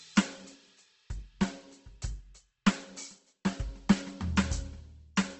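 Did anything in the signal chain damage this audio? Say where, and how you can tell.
Yes: likely Opus compression at the codec stage. This music sounds grainy, rough and noisy throughout, and the spectrogram shows nothing above 8.2 kHz, which suggests a low-bitrate wideband encode.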